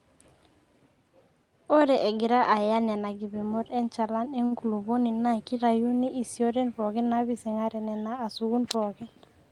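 At 4.45 to 4.53 s the speech briefly hangs: one sound is held about 58 ms too long, with a faint buzzy, slightly dipped quality, and then the talker carries on from exactly where they left off, with nothing lost. It is a short stall from a late packet. A packet on the call path arrived late, the jitter buffer ran dry, and the receiver stretched the last audio to fill the gap. The rest of the speech is then heard about 58 ms later than before. The call codec's coding noise is present throughout, and the top end stops near 12 kHz, which fits Opus at around 32 kbps.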